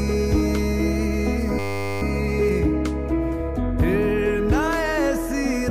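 A system hang loop occurs from 1.59 to 2.02 s: the system froze while the sound hardware kept replaying one 10 ms stretch of its buffer, about 43 times, so the audio turns into a steady 100 Hz buzz, with little or no audio missing afterwards.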